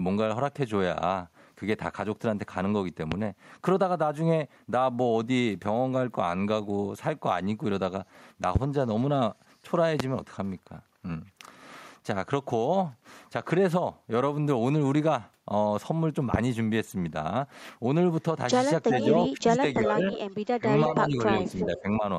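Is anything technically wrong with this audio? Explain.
Yes. There are three kinds of fault.

Loud pops at 3.12–3.15, 8.56–8.58, 10.00–10.03 and 16.34–16.37 s: single sharp clicks about 15 to 20 dB above the speech, likely from a voltage spike such as a switch or static discharge.

Echo leak at 18.85–19.07, 20.12–20.19 and 21.58–21.81 s: a repeat of the voice, about 5 to 10 dB down, trails 0.36 s behind. A far-end echo canceller likely failed to remove its loudspeaker's sound.

Speech suppressed in double talk at 19.29–20.05, 20.57–20.66, 21.08–21.20 and 21.38–22.04 s: the voice dips by up to about 20 dB in pieces. The canceller likely ducked it while both sides spoke.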